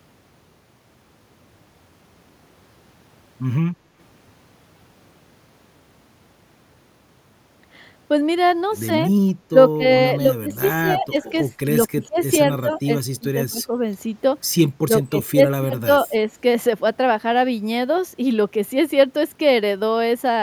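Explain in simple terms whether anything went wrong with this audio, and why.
A couple of things go wrong here, both typical of a speakerphone-style call. The first is speech suppressed in double talk. From 9.48 to 9.88 s the voice briefly drops out almost completely, then from 10.2 to 13.8 s it keeps dipping and getting patchy, and again from 14.84 to 16.31 s it sinks noticeably. This is likely the other side talking at the same time, with the echo canceller unable to tell the talker from the returning echo, so it turned everything down.

The second is an echo leak, from 12.19 to 12.35 s. In the middle of that patchy stretch you can catch a faint, brief copy of the voice arriving about 135 ms late. It's quiet and short, more a ghostly scrap than a full repeat. It's most likely one side's loudspeaker sound being picked up by its own microphone, with its echo canceller letting a bit of it slip back through.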